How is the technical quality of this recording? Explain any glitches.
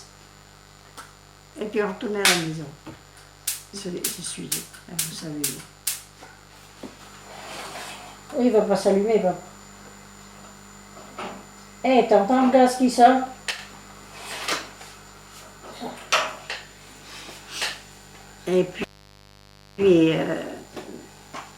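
The technical quality is compromised by two faults: a continuous buzz and a brief level dip.

Mains buzz runs through the whole recording, built on 50 Hz. Sharp switching spikes, twice per mains cycle, stack up harmonics reaching into the kilohertz range, giving a steady, raspy buzz sitting roughly 30 dB below the programme.

From 13.51 to 13.59 s, about 80 ms, the level drops abruptly by about 6 dB and then recovers. That fits one channel dropping out, which is the likely cause. Content common to both channels halves in the mono sum, and anything only in the missing side vanishes momentarily.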